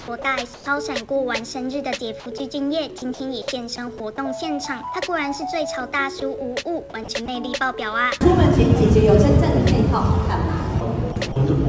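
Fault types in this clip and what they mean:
Sound dropped by the voice detector: Short pieces of sound vanish into steady, featureless noise, likely because the sender's voice detector judged them to be background and stopped transmitting, leaving the receiver to fill the gap with comfort noise. This happens at 0.22 s, 2.98 to 3.02 s, 3.98 s and 6.2 s. Each gap lasts 20 to 40 ms.
Comfort noise in place of the background: From 0.54 to 0.66 s, 120 ms of the real background is replaced by a smooth synthetic hiss. The hiss lacks the texture of the surrounding ambience and sits about 4 dB lower, with the background itself about 24 dB below the loud parts. This is likely discontinuous transmission: the sender paused during an apparent silence and the receiver generated approximate noise until the sound resumed.
Sound chopped by the voice detector: In three stretches, 2.2 to 2.4 s, 7.04 to 7.28 s and 11.12 to 11.36 s, the sound turns choppy. 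Its edges and quiet portions drop out in pieces totalling 60 to 80 ms per stretch. The likely cause is the voice detector toggling between sending and muting more than once, with comfort noise filling each off period.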